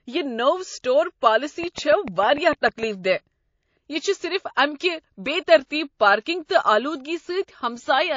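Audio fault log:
Throughout, MP3 compression. The treble sounds dull and the speech has a watery, swirly texture. This likely comes from a low bitrate, around 32 kbps, so weak detail is discarded.
1.64 to 2.84 s, train of clicks. Right after "یہ نوٚو سٹور", about ten regular ticks sound at 6.7 per second, peaking about 5 dB above the speech. The likely cause is interference or a faulty connection.
5.66 and 6.45 s, pre-echo. A hiss about 20 dB up fills roughly 45 ms before each attack, which fits 72 ms codec blocks never switched to short ones.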